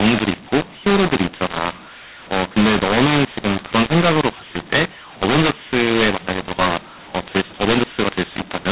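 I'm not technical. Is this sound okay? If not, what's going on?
No. The speech is harsh and distorted from start to finish, and the pauses are filled with a gritty hiss instead of silence. This is a mu-law and A-law mix-up. The call was packed in the A-law style of G.711 telephone coding but unpacked as mu-law. So loudness gets scrambled: some parts come out too loud, others too soft, and the quietest moments are pushed up into audible noise.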